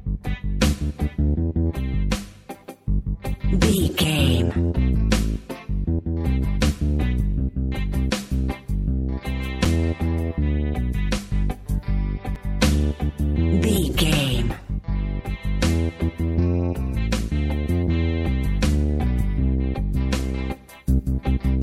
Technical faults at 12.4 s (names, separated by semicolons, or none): block of digital silence